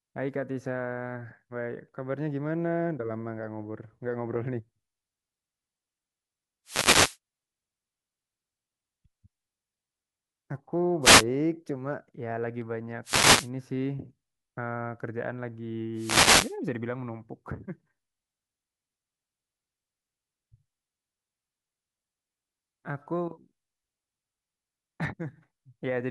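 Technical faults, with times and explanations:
6.65–7.17 s, 11.02–11.24 s, 13.03–13.50 s and 15.95–16.56 s, wireless microphone noise hits: short swishes of static wash over the speech, each a fraction of a second. The mic's FM signal dips as reflections cancel it, so receiver hiss surges up until the signal returns.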